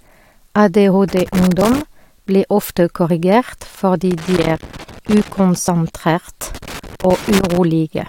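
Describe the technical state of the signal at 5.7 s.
At 5.67 s the compressed stream carries damaged data: a brief stretch of the encoded bytes is corrupt, so the decoder cannot read the frame there correctly, loses its place in the stream and has to hunt for the next valid frame header before decoding resumes. In the speech this comes through as a very short chirp or blip, a momentary burst of garbled sound lasting only about 11 milliseconds before the normal signal returns.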